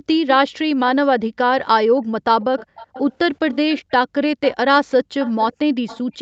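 From 0.0 to 0.77 s and again from 1.31 to 2.07 s, the background is gated by the echo canceller. While the far end's loudspeaker output is active, the canceller pulls the microphone down by about 40 dB, so the room tone drops away in short holes of a few hundred milliseconds in total and returns once the suppressor releases. The same pumping recurs at 4.0–4.14 s, 5.04–5.18 s and 6.04–6.18 s, brief dips of roughly 0.15, 0.15 and 0.1 s.

From 2.41 to 4.55 s an echo leak is audible: a faint delayed copy of the speech trails the original by about 383 ms, sitting around 20 dB below it. The likely cause is a loudspeaker-side echo canceller that failed to fully subtract what its microphone picked up and sent the residue back. From 5.2 s to the end the leak returns at a similar 386 ms delay but stronger, about 15 dB down, and is more clearly heard as a second, lagging voice.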